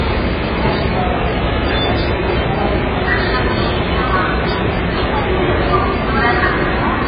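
Throughout, dull, smeared audio with nothing above 5 kHz, likely from heavy AAC compression at a very low bitrate. On a spectrogram this shows as a flat ceiling with patchy holes.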